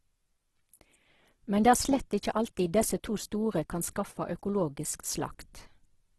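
Throughout the speech, the signal has likely passed through Opus compression in its music (CELT) mode at a very low rate, one that fits a bitrate near 12 kbps. Starved of bits, the encoder rebuilds thin bands by folding lower ones upward or filling them with noise. So the sound turns rough, grainy and hissy rather than swirling, and with nothing above about 12.2 kHz, the top end is cut off and dull.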